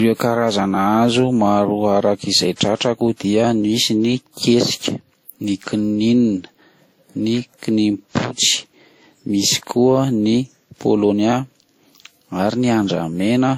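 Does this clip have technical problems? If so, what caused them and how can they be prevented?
Yes. Throughout the speech there are layered compression artefacts: the artefacts of more than one codec are heard together. This is likely transcoding between lossy codecs, with the sound pointing to a WMA encode at around 48 kbit/s that was later re-encoded as Vorbis at around 41 kbit/s. The second encoder spent its limited bits reproducing the first one's damage and added its own. On a spectrogram, everything stops flat at 16.5 kHz. Keeping a lossless master and encoding only once, straight from that master, prevents this.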